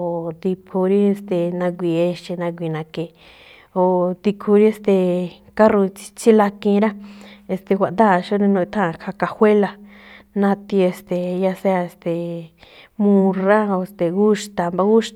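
No technical faults are audible anywhere in the speech recording.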